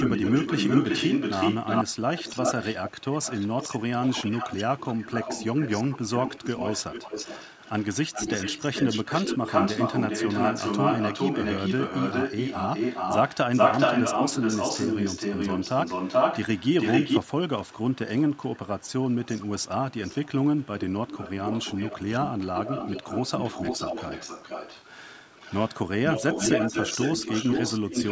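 A far-end echo canceller is likely failing to remove what its loudspeaker feeds back into its microphone, so an echo leak returns a delayed copy of the speech. From 0 to 17.3 s it trails by 0.40 s at about the same loudness as the speech; from 17.6 to 24.9 s, 0.45 s behind and clearly quieter; from 25.3 to 25.8 s, a faint scrap at 0.47 s; from 26.1 s to the end, 0.48 s behind and again equally loud.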